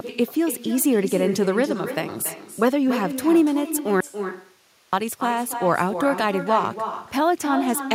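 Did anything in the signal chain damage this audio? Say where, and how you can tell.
Yes. In the call-processing stage there is echo with no canceller. The far end is playing the call over a loudspeaker, its microphone picks that up, and nothing removes it before it returns. Across the whole clip every phrase is followed, about 300 ms later, by a copy about 9 dB quieter that sounds thinner. The delay is the network round trip.

There is also an audio dropout to a faint residue from 4.00 to 4.93 s, losing about 0.92 s of sound. The signal cuts off abruptly mid-flow and returns just as suddenly, with no fade at either edge. The gap is not silent. It holds steady hiss about 40 dB below the normal level, so the path after the break stayed live. That points to a break early in the chain, likely in the analogue wiring ahead of a still-live input, rather than a network interruption.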